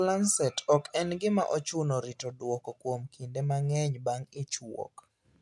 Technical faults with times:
none

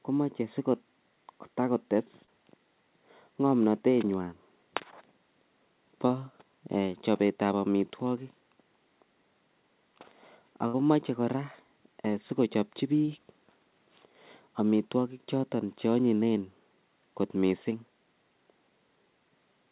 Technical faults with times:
2.24-2.29 short concealed packet loss
6.07-6.11 short concealed packet loss
10.67-10.75 burst of packet loss
13.05-13.09 short concealed packet loss

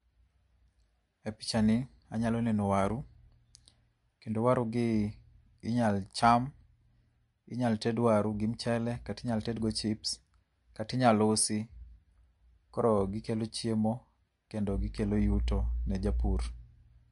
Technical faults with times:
0.00-17.11 MP3 compression

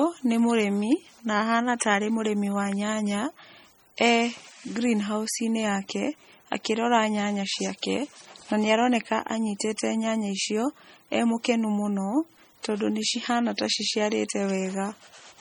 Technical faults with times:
0.00-15.40 MP3 compression
1.80 pre-echo

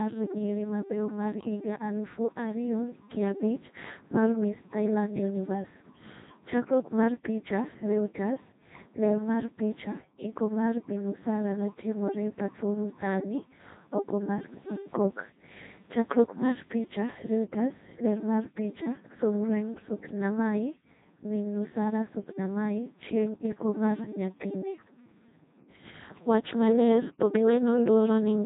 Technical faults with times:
0.00-28.45 Codec 2 vocoder

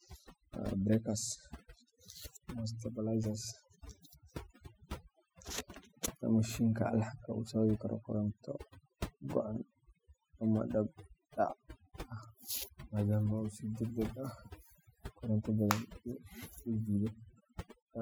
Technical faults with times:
0.00-18.02 overdone noise removal

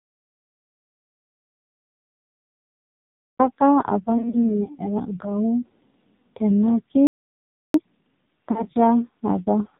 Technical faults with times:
0.00-9.80 AMR narrowband mobile codec
0.00-3.39 audio dropout to silence
4.18-4.63 lost AMR speech frames
7.07-7.74 playback stall
7.74-8.40 time-compressed catch-up
8.51-8.64 lost AMR speech frames

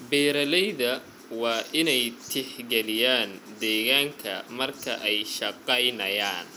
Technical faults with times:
none

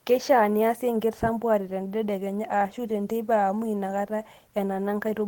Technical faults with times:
none

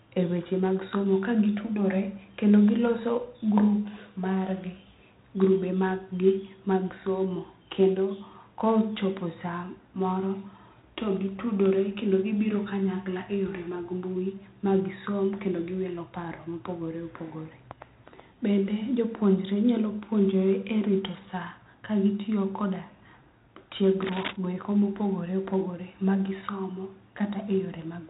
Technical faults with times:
0.00-28.09 4-bit ADPCM compression
24.02-24.36 cable scratch noise

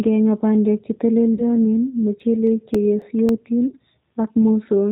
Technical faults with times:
0.00-4.92 G.729 codec
1.34-1.43 VoIP packet loss concealed by the speech codec
1.65-3.56 CD scratch ticks
3.68-3.75 VoIP packet loss concealed by the speech codec

